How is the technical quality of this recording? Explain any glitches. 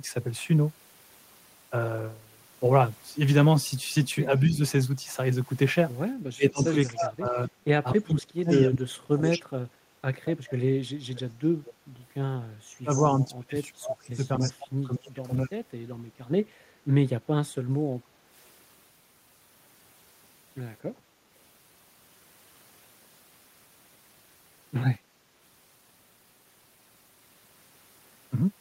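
The recording has some real trouble from an echo canceller on a speakerphone call, concentrated between about 4 and 18 seconds.

Speech suppressed in double talk shows up briefly at 4.28 to 4.59 s, dipping about 10 dB, then heavily from 6.27 to 16.78 s, where the voice ducks as much as about 35 dB and drops out in pieces for roughly five seconds in total. The likely cause is the canceller mistaking overlapping talk for echo and turning everything down.

Echo leak appears at 6.55 to 8.6 s and again at 12.91 to 14.52 s: a faint copy of the voice trailing 243 ms behind, around 15 dB under the main speech. It's likely residual loudspeaker sound the canceller didn't fully remove before sending it back.

Background gated by the echo canceller hits at 18.02 to 18.3 s. The room tone suddenly sinks by about 7 dB for a moment, then comes back, because the canceller clamped the microphone while the far end was playing.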